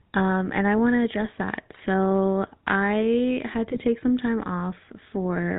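GSM full-rate codec coding runs through the whole speech recording, which fits the 13 kbps full-rate coder. It rebuilds the voice from a vocal-tract filter fed by sparse, regularly spaced pulses and cuts everything above 4 kHz, leaving a plainly audible buzzy, gravelly roughness. GSM bit errors strike from 1.72 to 1.78 s, right after "want to address that", and again from 3.70 to 3.80 s, between "I had" and "some time". Corrupted filter, pitch or gain values in the decoder warp the spectrum for a few frames, so the voice breaks into brief squawks and gargling. The second burst is longer and points to more frames being hit.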